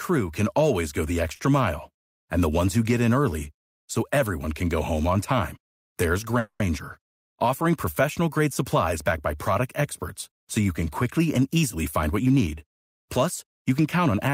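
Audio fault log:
1.35–1.41 s, short stall from a late packet: the speech sound is held about 40 ms too long with a slight buzz or dip. The jitter buffer ran dry, then resumed without loss.
6.39–6.62 s, call audio freeze: the last speech sound continues as a fading buzz or hiss for about 210 ms, never reaching silence, then resumes intact. The likely cause is packets held up in transit.
11.37–14.29 s, jitter buffer speed-up: speech runs about 7% fast at unchanged pitch and sounds hurried. About a fifth of a second of pitch-period slices was trimmed to cut the excess delay.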